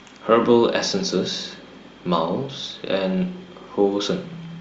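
Nothing goes wrong in this stretch of speech, so there's no fault to point to at any moment along the way.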